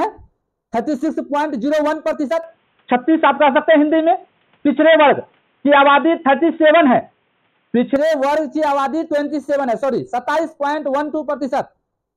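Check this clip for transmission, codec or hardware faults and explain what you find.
One fault is present. From 2.43 s to 7.96 s the sound turns dull and boxy, with nothing above 3.8 kHz, a level shift of about 5 dB and a new noise floor roughly 45 dB down, then clears again. There is no gap at either switch. This is likely an input switched to a poorer, narrower-band device.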